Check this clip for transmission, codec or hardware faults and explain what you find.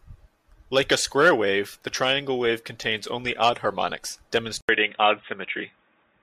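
An input switched to a poorer device at 4.61 s and stays there to the end at 6.22 s. After an 80 ms silence the speech turns dull and boxy, with nothing above 3.8 kHz and a faint new background hiss, while the level stays much the same. This most likely reflects a mid-recording change to a narrower-band microphone or headset profile.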